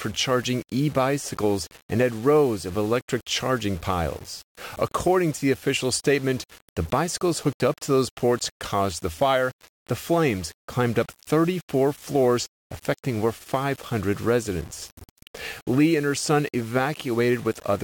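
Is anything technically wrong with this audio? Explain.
Yes, two faults. Throughout, the speech was likely rounded to about 6 bits without dither, so the error tracks the signal, leaving grainy distortion roughly 25 dB down that makes quiet passages gritty. From 0.12 to 17.75 s, clock slip clicks appear, likely from two unsynchronised clocks differing by a couple of hundred parts per million, dropping or repeating single samples about ten times a second as faint, regular ticks.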